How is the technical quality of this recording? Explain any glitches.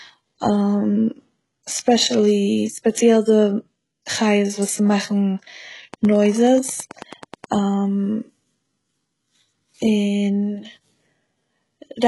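The quality is rough: heavy low-bitrate coding runs through the whole clip, and there's a short burst of clicking in the middle.

Throughout, the speech has that gritty, metallic top end, with s sounds going lispy and nothing at all above about 11.5 kHz. That's most likely HE-AAC compression at a very low rate, consistent with something around 12 kbps. Only the lower band is really coded. The treble is patched in by copying lower content upward under a coarse envelope, so the harmonics don't line up and the highs sound synthetic.

From 5.94 to 7.45 s there's a train of clicks: about fifteen near-identical ticks at a steady 9.3 per second, poking up to roughly 5 dB above the speech. The regular, same-shaped pulses suggest interference from nearby gear or a faulty connection or power supply, which is the likely cause. You hear them as a ticking layered over the speech for that second and a half.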